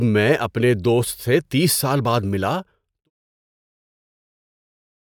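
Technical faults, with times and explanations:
Nothing stood out on listening to this speech.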